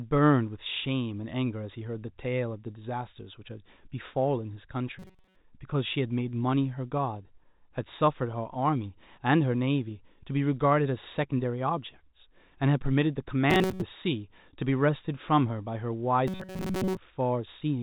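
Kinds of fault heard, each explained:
Robotic sound from repeated short buffers: three times, near 5.0, 13.5 and 16.3 s, the speech becomes a rigid metallic 188 Hz buzz, likely from a player repeating a roughly 5 ms slice. A spectrogram shows evenly spaced harmonic stripes, and the waveform shows roughly repeating cycles.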